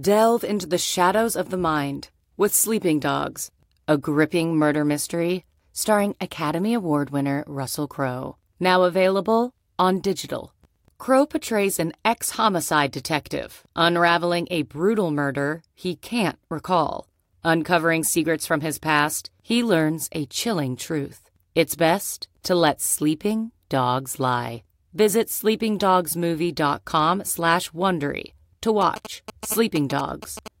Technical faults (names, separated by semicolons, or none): GSM signalling bursts